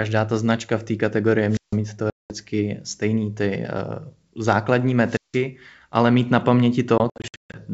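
A wireless microphone squelch dropout begins at 1.49 s, just after "značka v té kategorii", and lasts until 1.77 s. The radio signal from the FM microphone fades, the hiss and static rise, and the receiver's squelch then mutes the output for about 156 ms before the speech comes back.

Packet loss on an ADPCM call follows at 2.10 to 2.33 s. About 200 ms of audio, around ten packets, is replaced by hard-edged silence. Because the decoder's adaptive predictor and step size are no longer matched to the sender's, the speech resumes slightly distorted, then settles after a few tens of milliseconds.

A second squelch dropout runs from 5.05 to 5.43 s, ending just before "ale mít na". It has the same rise of hiss, and the mute lasts about 168 ms.

A second stretch of ADPCM packet loss comes after "ale mít na", spread from 6.98 to 7.59 s. About 340 ms goes missing in scattered gaps over 560 ms, the longest unbroken gap is 140 ms, and roughly fifteen packets are lost. 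After each gap the decoder has to re-converge, so the sound is briefly distorted.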